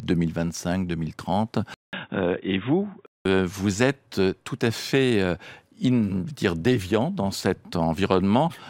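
Input switched to a poorer device, from 1.74 to 3.25 s: the sound goes dull and boxy after a gap of about 0.19 s, with nothing above 3.8 kHz, and a faint new noise floor appears, roughly 55 dB below the speech, while the level stays about the same. The likely cause is the recording input changing mid-take to a narrower-band microphone or headset call profile. The dull sound begins just before "vous êtes tout à".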